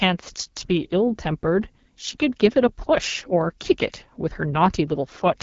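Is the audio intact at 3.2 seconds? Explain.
No. At 3.2 seconds the speech carries AMR wideband (HD Voice) codec damage, which runs through the whole clip. The codec rebuilds the voice from a pulse-excited vocal tract model up to 6.4 kHz and fills the band above that with shaped noise. Nothing is present above about 7.4 kHz. The roughness and raspy edge here are plainly audible, which fits one of the lowest AMR-WB modes, around 8.85 kbit/s.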